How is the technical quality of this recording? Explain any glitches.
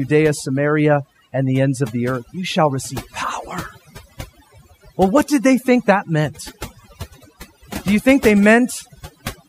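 The main problem is overdone noise removal, and it runs through the whole recording. Someone set the noise reduction far too hard, so any frequency band sitting near its idea of the noise floor got pulled way down or switched off, taking the quieter parts of the speech along with it. You hear the background drop and break up into little twinkling specks.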